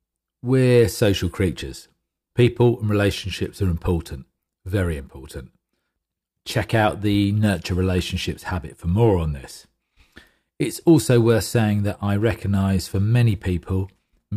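No technical faults can be heard anywhere in the speech, so there is nothing to describe in time order.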